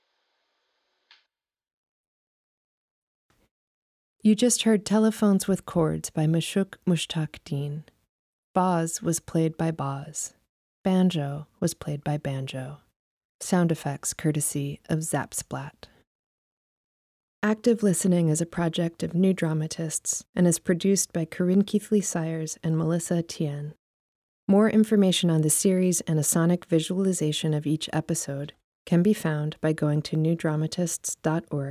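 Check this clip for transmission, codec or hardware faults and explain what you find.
Nothing in the speech signal points to a transmission, codec or hardware problem; it stays continuous and steady throughout.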